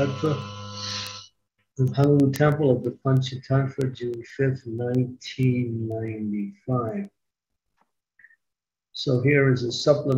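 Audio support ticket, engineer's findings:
Word clock ticks, 0.26 s to 10.12 s: sharp, uneven ticks recurring steadily about every 0.15 s, roughly seventy total. Receiver is unlocked from the digital source's clock, drifting on the order of 150 ppm, so it slips one sample each cycle.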